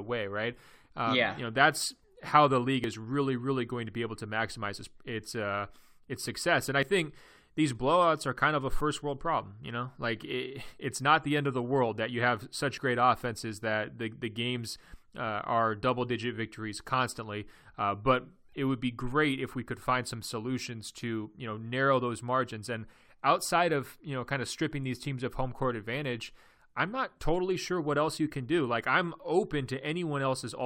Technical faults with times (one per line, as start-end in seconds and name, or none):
2.84 overlap between stream segments
4.84 overlap between stream segments
6.83 overlap between stream segments
8.81 overlap between stream segments
12.78 overlap between stream segments
14.76 overlap between stream segments